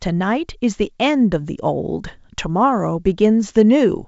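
Nothing stood out on listening to this speech, which comes through the G.722 wideband telephone path at 64 kbit/s.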